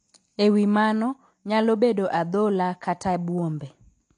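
From start to finish the speech carries AAC compression damage, likely from AAC-LC at a low bitrate around 32 kbps. Nothing remains above about 9.8 kHz. The coder has starved the spectrum. Sibilants turn fizzy and smeared, and sustained sounds warble. The whole recording sounds dull.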